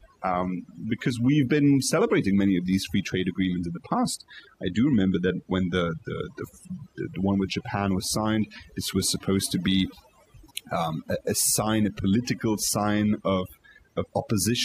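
From start to finish there's overdone noise removal on this speech. The denoiser was pushed too hard, so any frequency band sitting near its noise estimate gets pulled way down or cut out, taking quieter bits of the voice along with it. The background drops away and breaks into twinkling, warbling specks.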